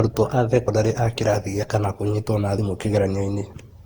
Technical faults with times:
0.00-3.85 generation loss
3.53 audio missing between chunks

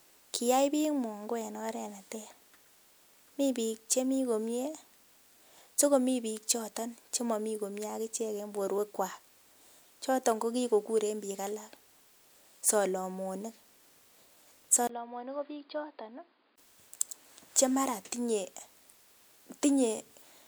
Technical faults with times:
14.87-16.58 input switched to a poorer device

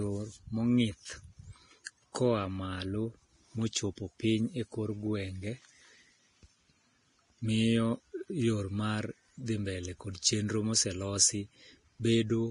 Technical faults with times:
0.00-12.50 Vorbis compression

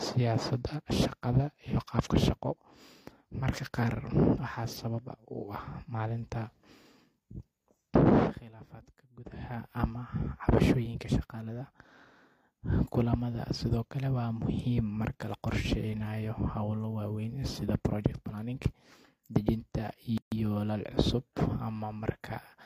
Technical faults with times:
20.18-20.32 gap at a join of encoded pieces

